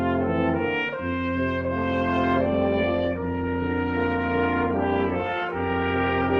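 Up to about 1.77 s the music sounds clean, then the quality drops abruptly with no gap and stays down through the end of the clip. That's an adaptive stream at a lower bitrate: the player switched to a cheaper version mid-stream, presumably because the connection slowed. Coding artefacts creep in, which fits a step from roughly 64 kbit/s Opus down to around 16 kbit/s.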